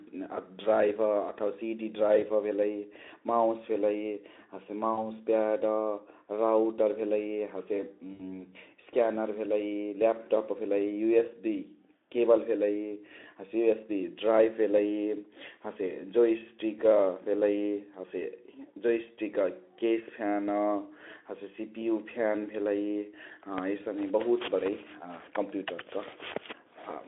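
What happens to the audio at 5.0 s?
Packets were lost around 40 ms of speech, which fits two dropped frames, and this is VoIP packet loss concealed by the speech codec, from 4.93 to 5.04 s. The Speex decoder bridged the gap by extending its last pitch and spectral shape at falling gain, so the speech briefly smears into a fading buzzy tone or coloured noise and stays thin until the decoder recovers.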